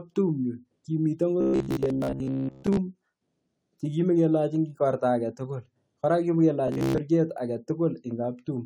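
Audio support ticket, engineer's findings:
Robotic sound from repeated short buffers, 1.41–2.77 s and 6.68–6.98 s: rigid metallic buzz at 66.7 Hz, likely a starved jitter buffer looping 15 ms blocks. Fixed pitch distinguishes it from gaps or clicks.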